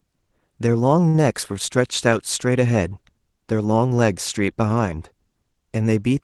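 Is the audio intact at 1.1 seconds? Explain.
No, right around there you get a short stall from a late packet, from 1.08 to 1.15 s. The jitter buffer ran dry, so the receiver held the last sound for about 57 ms until the packet showed up, then picked up where it left off.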